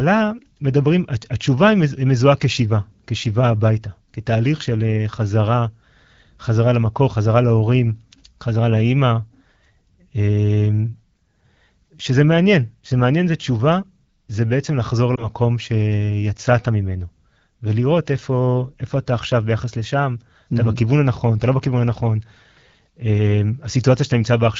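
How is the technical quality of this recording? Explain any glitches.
The recording has one glitch. The AMR wideband (HD Voice) coding is audible as the light, clear quality of speech coded at around 12.65 kbit/s.

From 15.15 to 15.27 s the speech briefly dips or warbles, then recovers. This is a lost AMR speech frame. A radio error corrupted the frame so it failed its checksum, and the decoder filled the gap by repeating the last good pitch and vocal tract settings at reduced gain. The short, isolated disturbance fits a single lost 20 ms frame, with the voice sounding weak or rough for a moment afterwards.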